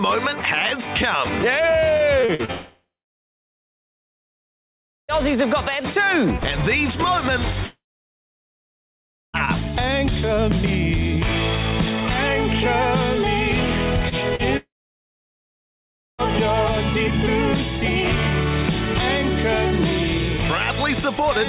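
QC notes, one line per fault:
1.97–2.51 s, repeated packet loss (robotic sound): five gaps of up to 44 ms in quick succession, each patched by repeating the last sound. The result is a choppy stutter rather than one clean break.
2.51–5.11 s, 7.66–9.36 s and 14.57–16.21 s, long network dropout: a short fading buzz gives way to silence lasting about 2.2, 1.5 and 1.5 s. This likely comes from audio never arriving, and unlike brief concealment the lost stretch never returns.
14.09 s and 14.35 s, short concealed packet loss: holes of about 30 ms, each filled by continuing the last sound. They are heard as a brief smear or wobble, too short and isolated to sound robotic.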